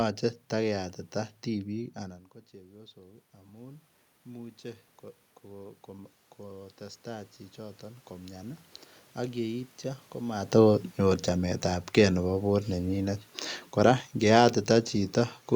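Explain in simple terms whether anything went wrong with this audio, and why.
Automatic gain rising happens twice, from 2.99 to 4.58 s and from 6.38 to 10.42 s. The sound got quieter after the talker moved back. The system slowly turned itself up, so voice and room noise swell together.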